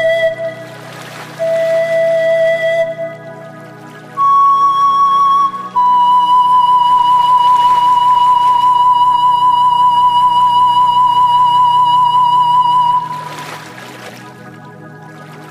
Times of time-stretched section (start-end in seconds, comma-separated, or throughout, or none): 12.89-15.50